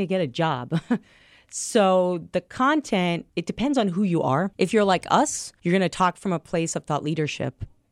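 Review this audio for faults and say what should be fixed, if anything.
Nothing needs fixing: the speech signal holds steady throughout, with no audible technical faults to correct.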